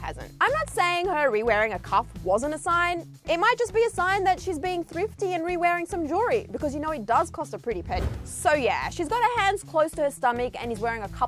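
No technical fault can be heard anywhere in the audio. Nothing in the sound points to a problem with how it was captured, carried or reproduced.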